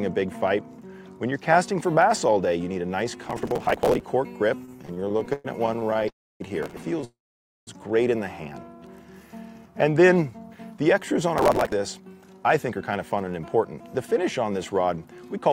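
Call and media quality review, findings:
Processor overload crackle, 3.24–4.06 s, 6.63–6.83 s, 11.38–11.72 s. Gritty tearing rides on the audio, then stops. Probable component: audio processing thread on the capture or playback device. Mechanism: CPU deadlines missed repeatedly. Each late buffer is skipped, leaving a hard-edged micro-gap. The tick spacing fits a buffer of about 5 ms. The longest burst, near 3.2 s, runs most of a second.

Repeated stalls (stutter), 4.65–6.06 s. Audio drags and hiccups through about 25 short stalls. Roughly 30% of that span is filled, 427 ms in total. The longest single hold is 113 ms. Nothing is lost. Probable component: receive jitter buffer. Mechanism: packets arrive late or too slowly, the buffer runs dry again and again, and the receiver stretches the last sound each time.

Call audio freeze, 6.08–6.42 s and 7.05–7.69 s. Sound holds briefly, fades, then drops to near silence: about 280 ms of silence in the first freeze and 530 ms in the second. 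Playback resumes where it stopped, 320 ms and 623 ms later. Nothing is missing. Likely cause: packets held up in the network, leaving the jitter buffer empty. Delay grows by the full freeze length each time.

Jitter buffer speed-up, 10.42–15.50 s. Audio runs about 10% fast at unchanged pitch and sounds hurried. Roughly half a second is trimmed over the span. Probable component: adaptive jitter buffer on the receiver. Mechanism: excess buffered audio after the earlier delays is drained by cutting many short pitch-period chunks in a row. The crackle burst at 11.38 s sits inside this stretch.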